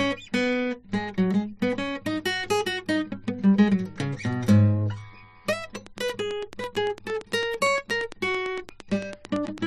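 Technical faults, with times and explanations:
5.75–9.59 s, train of clicks: a regular ticking at about 8.9 clicks per second, roughly forty in all, sits about 10 dB above the music, likely from nearby equipment interference or a faulty connection or power supply; each shows as an evenly spaced thin vertical spike.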